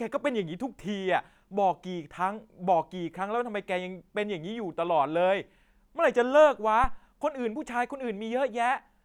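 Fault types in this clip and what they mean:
Phantom power thump: a supply voltage switched on or off on a live input sends a sudden DC step through the coupling capacitors, and the circuit discharges it as a low-frequency pulse. In this speech clip it lands at 6.84 s as a deep thud peaking at about -18 dBFS, with a fast 39 ms decay so the disturbance is gone by roughly 7.01 s.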